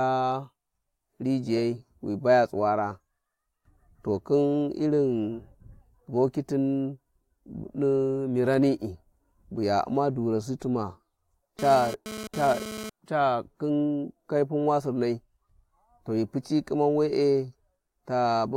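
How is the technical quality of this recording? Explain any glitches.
The speech is marred by one glitch, a GSM phone buzz from 11.59 to 12.90 s. A 2G phone nearby was sending data in bursts about 217 times a second, and the audio circuitry rectified those radio pulses. You get a hard, raspy 217 Hz buzz, full of harmonics, sitting about 11 dB under the speech.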